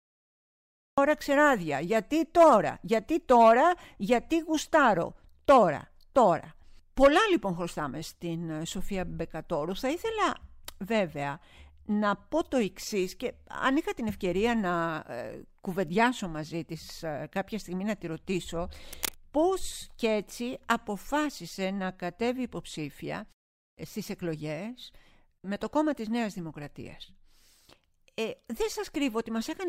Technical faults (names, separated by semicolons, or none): cut-off start; cable scratch noise